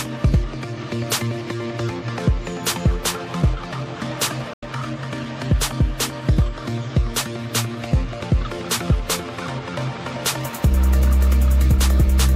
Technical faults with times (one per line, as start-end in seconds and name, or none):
4.53-4.63 damaged data in a compressed stream